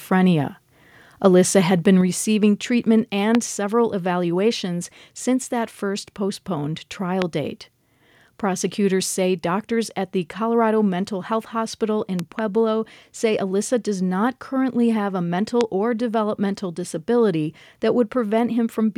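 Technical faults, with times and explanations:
2.01 s, microphone volume stepped down. Just after "had been", the speech and background drop together by about 4 dB in one step. The step is sudden, not a fade. The likely cause is call software lowering the microphone input because it judged it too loud.
3.35 s, 7.22 s, 12.19 to 12.41 s and 15.61 s, loud pop. Single sharp pops sit just before "several evaluations since that" and just after "since that first postponed". A double pop falls at 12.19 to 12.41 s. Each stands well above the speech, which continues underneath. The likely cause is a sudden voltage pulse from a plug, switch, static or driver glitch.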